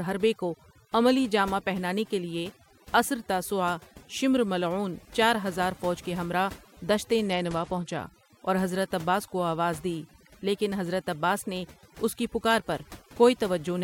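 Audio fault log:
Throughout: overdone noise removal. The background sits at an unnatural near-silence broken by twinkling specks. A noise reducer pushed too hard is cutting individual frequency bands to nothing whenever their level drops close to its noise estimate. The softer parts of the speech fall below that threshold along with the hiss, so they vanish too. The bands that flicker in and out produce the glittering residue in the gaps.
7.26 to 8.08 s: Bluetooth SBC bit pool drop. For a little under a second the treble goes dull and a gritty, grainy noise rides on the speech, then clears. The link appears to have come under pressure, and the sender cut the SBC bit pool to keep audio moving. The sound fits a fall from a bit pool of 31 to 12, around 88 kbps. That leaves the top sub-bands starved of bits and the remaining bands coarsely quantised until the rate returns.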